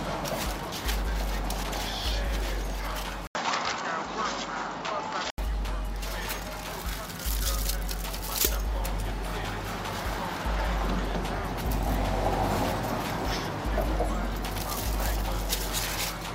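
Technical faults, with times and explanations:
3.27 to 5.38 s, input switched to a poorer device: the sound abruptly turns duller, with nothing above 7.6 kHz, and a faint new background noise sits well below the signal while overall level stays about the same. An 80 ms silence at the switch and the changed noise floor point to a likely change of input hardware rather than a filter or codec bandwidth drop, which would narrow the band without a gap or a different noise.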